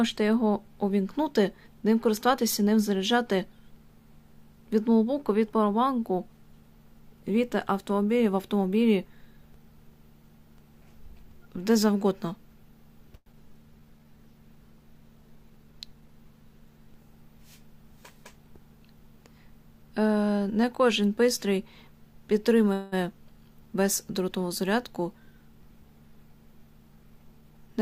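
At 13.15 s the sound turns into a fading buzz for about 176 ms, then about 20 ms of near silence, and resumes at 13.35 s with about 60 ms gone. This is a long network dropout, likely a run of lost packets, concealed by extending the last sound. On a spectrogram the harmonics smear into flat, decaying bands before a short dark gap. In the waveform, a repetitive, shrinking envelope gives way to a jump where the missing piece was cut out.

From 13.80 to 14.05 s a jitter buffer slow-down stretches the audio by 55 ms, to 82% speed at unchanged pitch. The receiver repeated pitch periods to refill a low buffer, giving a drawn-out passage. A spectrogram shows the same harmonic spacing stretched in time. The waveform shows near-identical cycles repeated back to back.

At 22.73 s the sound holds as a fading buzz for about 190 ms, then continues at 22.94 s with nothing lost. This call audio freeze occurs when the buffer ran dry, likely from packets held up in transit, and leaves the playout delay about 190 ms later. 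On the spectrogram the frozen spectrum forms smooth horizontal bands. The waveform shows a decaying repeated pattern inserted between intact sections.

There are also three jitter buffer speed-ups: 15.36–16.09 s at 114% speed with roughly 0.1 s trimmed, 24.90–25.82 s at 106% with roughly 70 ms trimmed, and 26.81–27.78 s at 110% with roughly 0.1 s trimmed. The receiver dropped pitch periods to shrink an overfull buffer, so the audio sounds hurried without any pitch shift. Spectrograms show events compressed in time with harmonics unchanged. Waveforms show slightly shortened stretches with small seams where cycles were removed.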